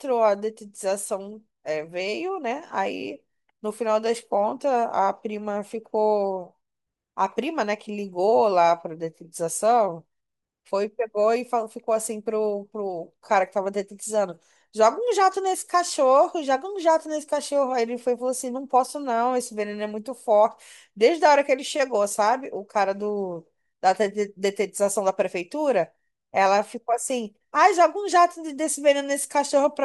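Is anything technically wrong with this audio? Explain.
No, nothing technically wrong turns up anywhere in this speech recording.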